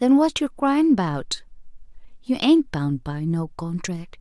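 No technical faults are audible anywhere in the recording.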